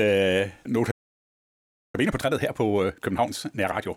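At 0.91 s the speech cuts to silence for about a second, resuming at 1.95 s; this playback stall likely comes from the player running out of data or being blocked. From 1.95 s to 3.89 s the speech sounds hurried at normal pitch: time-compressed catch-up, where the player removes and cross-fades small slices to clear its backlog at 1.5 times speed.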